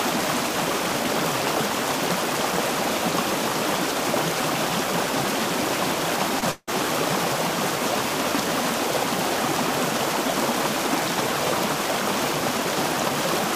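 At 6.39 to 6.43 s there is a short concealed packet loss. About 20 ms of audio never arrived in time, and the decoder patched the gap by extending the preceding sound before crossfading back into the real signal. To the ear it is a tiny smear or wobble. On a spectrogram the harmonics or noise bands briefly flatten into a repeated, slightly blurred slice, and the waveform shows a short stretch of overly regular cycles.

From 6.51 to 6.69 s the audio turns into a fading buzz or hiss over roughly 160 ms, the last 50 ms or so of which is near silence, then resumes with that portion missing. This is likely a long network dropout: nothing reached the receiver, so it continued the last sound until the synthetic fill died away. A spectrogram shows a smeared, decaying copy of the earlier spectrum ending in a dark gap. The waveform envelope shrinks steadily toward a flat line before the real audio returns.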